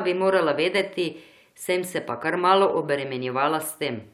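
Two devices likely running on independent clocks that disagree by a couple of hundred parts per million leave the buffer between them drifting until it overflows or runs dry, forcing it to drop or repeat a few samples at a time. These clock drift buffer slips begin right after "bi morala" at 0.78 s and recur every 0.96 s through 3.66 s. Each slip is a click in the speech, arriving at a steady, regular interval.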